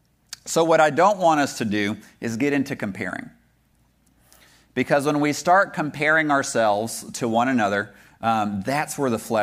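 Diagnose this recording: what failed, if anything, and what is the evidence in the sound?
Listening to the speech, nothing stood out as a fault at any stage of the chain.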